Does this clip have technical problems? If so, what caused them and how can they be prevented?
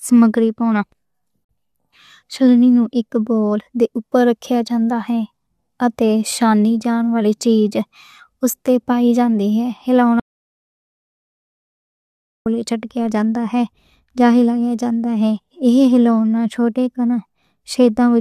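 Yes. A gap at a join of encoded pieces opens from 1.45 to 1.49 s, a 47 ms silence from untrimmed encoder delay and padding where separately encoded pieces, about 10 s long, meet. It appears as a thin blank vertical stripe. Trim encoder delay and padding when joining, or encode the whole piece in one pass.

An audio dropout to silence runs from 10.20 to 12.46 s. The speech cuts off and about 2.2 s of silence follow, with no room tone and a flat waveform. It was likely caused by lost input, such as a disconnected device, failed link or stray mute. Secure connections and monitor input levels during recording.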